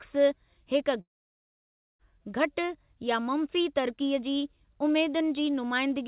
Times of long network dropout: 1.01-2.02

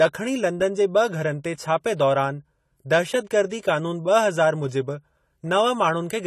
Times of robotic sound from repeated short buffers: none

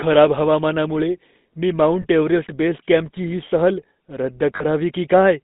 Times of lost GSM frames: 2.02-2.06, 4.56-4.64

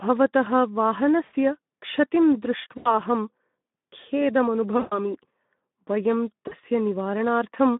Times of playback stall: none

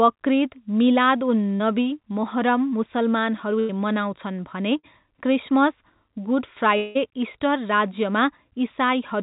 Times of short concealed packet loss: 1.56-1.62, 4.79-4.85

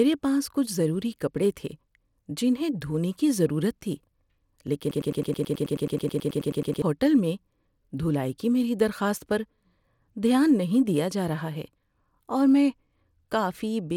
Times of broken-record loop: 4.91-6.82

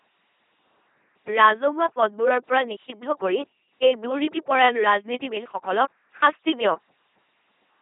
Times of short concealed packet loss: none

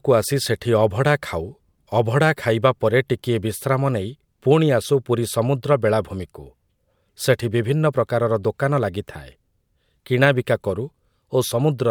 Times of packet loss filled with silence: none

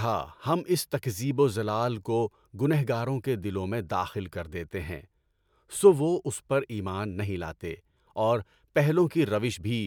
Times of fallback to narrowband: none

